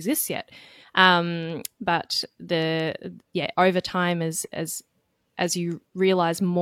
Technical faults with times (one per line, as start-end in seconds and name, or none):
0.79-0.85 damaged data in a compressed stream